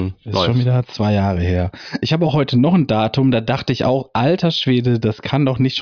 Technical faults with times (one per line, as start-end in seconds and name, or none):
none